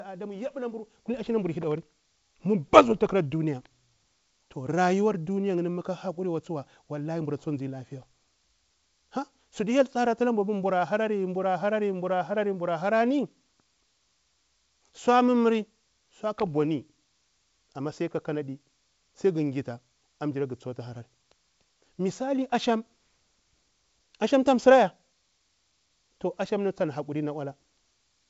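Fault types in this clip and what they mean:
The speech has the band-limited sound of G.722 wideband telephone coding at 64 kbit/s, with nothing above 7.7 kHz, and no fault can be heard in it.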